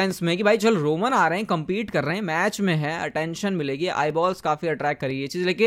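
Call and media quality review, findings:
Periodic USB or driver dropouts in speech: ticks every 1.0 s, about seven, from 0.11 s to 5.1 s. Well under a millisecond skipped each time, not silence-filled. Strict one-second spacing and audibility only during signal separate it from random network packet loss.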